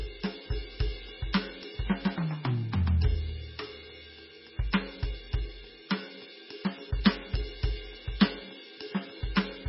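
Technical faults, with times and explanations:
Throughout, MP3 compression: the music sounds watery and swirly with nothing above 5.6 kHz, likely a very low bitrate around 16 kbps starving the encoder.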